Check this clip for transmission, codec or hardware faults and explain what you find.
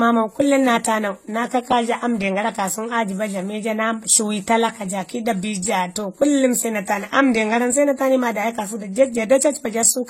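One codec fault runs through the whole speech clip.

Throughout, the speech carries layered artefacts from different codecs heard together, with nothing above 16.2 kHz. This is likely transcoding between lossy codecs: an AAC-LC stage followed by HE-AAC, both fitting roughly 32 kbit/s. The second encoder spends bits re-coding the first one's artefacts and adds its own.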